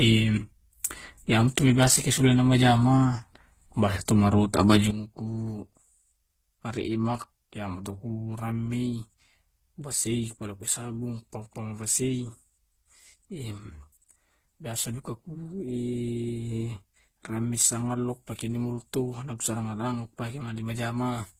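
Throughout the speech, two distinct sets of swirly, smeared artefacts overlap below a hard ceiling at 15.8 kHz. This is likely transcoding between lossy codecs, consistent with a low-rate HE-AAC stage re-encoded as Opus. A single codec would leave only one artefact character.

At 4.91 s, speech and background noise drop together by about 12 dB in a single step and stay there to the end, a sudden gain jump. Unlike a fade, there is no ramp.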